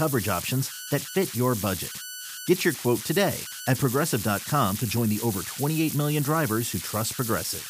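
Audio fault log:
throughout, converter idle tones: there's a whistle sitting around 1.5 kHz in the pauses and a grainy hiss under the quieter speech, only about 9 dB down. That's a delta-sigma converter running undithered, locking into repeating bit patterns when the input gets small.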